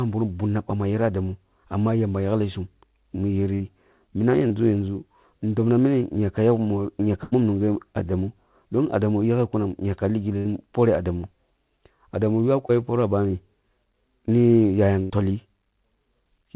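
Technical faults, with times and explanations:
3.54–3.62 s, 7.24–7.34 s, 10.38–10.47 s (after "ehn yaka li") and 15.03–15.12 s (after "ni yayam"): burst of packet loss. Between 60 and 80 ms of audio went missing each time. The receiver stretched the last sound and let it fade. Then the speech jumps ahead.
4.48–4.52 s and 12.67–12.71 s (just before "poroh ah bani"): short concealed packet loss. About 20 ms failed to arrive in time. The decoder patched it by extending the preceding sound and blending back in. You hear a brief smear or wobble, in telephone-band audio that stops near 4 kHz.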